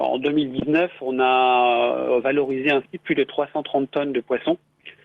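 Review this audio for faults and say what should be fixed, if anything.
At 0.59 to 0.63 s there's a short concealed packet loss: about 20 ms never arrived, so the decoder extended the previous sound and blended back, leaving a quick smear. A deeper jitter buffer or forward error correction on the link should cover gaps like that.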